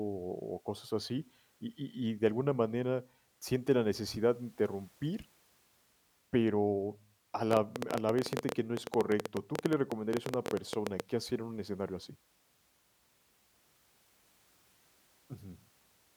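From 7.51 s to 11.01 s, after "pero a" and before "hacer en un escenario", a train of clicks, around forty of them, ticks over the speech at an uneven 11.8 per second, peaking roughly 20 dB above it, likely from electrical interference or a struggling interface.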